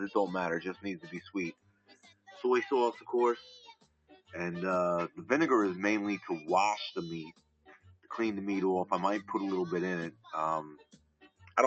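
Throughout, a noise suppressor made for speech is applied to music or sounds. It mistakes steady tones, ambience and tails for noise and pulls them down. The level swings by around 15 dB, rising and falling with the material.

Sound cut by the noise suppressor occurs at 0.74 to 1.35 s, 1.52 to 2.4 s, 3.6 to 4.34 s, 7.27 to 8.1 s, 10.11 to 10.32 s and 10.7 to 11.57 s. Held or decaying sound sinks in each. The drop is about 13 dB at 10.11 s and up to about 21 dB at 10.7 s. The call path's top end stops near 8 kHz, which fits Opus at around 32 kbps.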